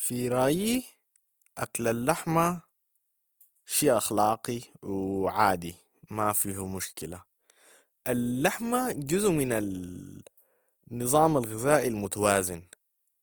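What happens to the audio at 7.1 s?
At 7.1 s the speech sounds grainy and rough, as it does throughout. This is likely Opus compression, where starved bands are refilled with noise, fitting about 24 kbps.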